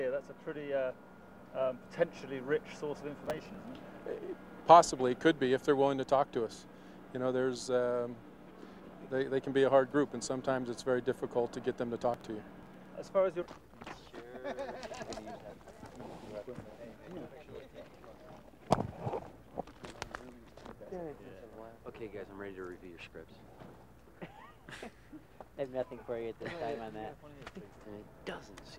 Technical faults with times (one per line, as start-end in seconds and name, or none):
3.24-3.61 processor overload crackle
12.14-12.86 processor overload crackle